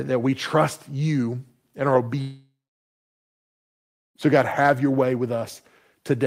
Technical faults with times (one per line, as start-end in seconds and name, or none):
2.21-4.17 long network dropout